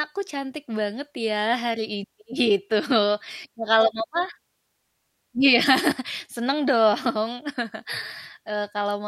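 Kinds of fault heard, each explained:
Nothing stood out on listening to this speech clip.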